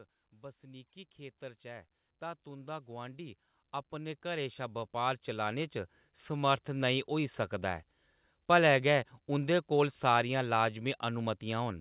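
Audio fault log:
0.3 to 6.96 s, automatic gain rising: the gain control judged the input too quiet and raised it by about 19 dB, so speech and background swell together.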